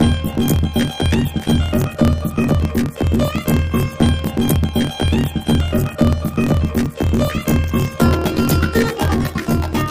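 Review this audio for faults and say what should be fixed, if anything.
Planar audio read as interleaved runs throughout. Each 26.12 ms block of left-then-right samples plays back as two double-speed halves, raising the pitch an octave (12 semitones) with a flutter at 38.3 Hz. Unlike simple resampling, the pace stays correct. Declare the buffer layout (planar versus interleaved) explicitly at every conversion stage.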